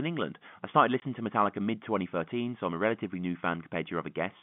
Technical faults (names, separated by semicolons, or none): packet loss filled with silence